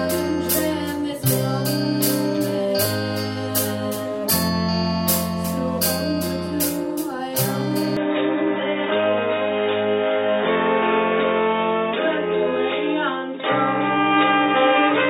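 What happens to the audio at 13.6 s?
At 13.6 s the sound is still dull and narrowed, as it has been since 7.97 s through to the end: nothing above 3.8 kHz, a faint new background noise well beneath the signal, and no gap or level jump. This is most likely an input switched to a poorer device. The changed noise floor is what separates it from a plain low-pass filter.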